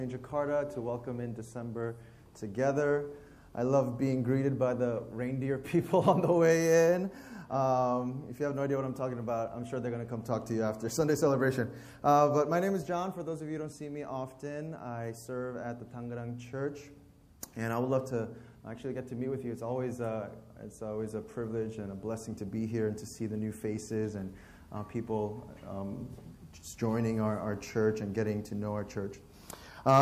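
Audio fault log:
17.41–17.43 s pre-echo: the codec coded a sharp attack inside one long block, which fits a window of about 36 ms with no switch to short blocks. Its quantisation noise spills 20 ms ahead as a hiss about 10 dB up, smearing the onset.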